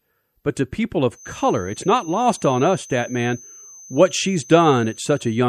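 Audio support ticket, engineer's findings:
Thin steady whistle at 6.2 kHz, entering at 1.1 s just after "but to people" and running to the end of the clip. About 25 dB under the speech, swelling and fading slowly in level. Feedback whistle, likely from the loudspeaker-to-microphone loop sitting right at the feedback point. One high frequency sustains without running away. Check monitor gain and microphone placement.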